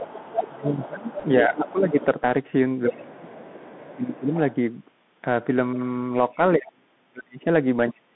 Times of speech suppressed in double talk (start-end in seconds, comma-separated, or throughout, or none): 0.49-1.95, 2.87-4.33, 6.35-8.16